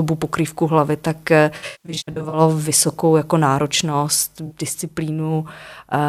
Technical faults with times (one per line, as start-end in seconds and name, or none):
1.56-2.41 AAC frame loss with concealment
4.46-4.52 AAC frame loss with concealment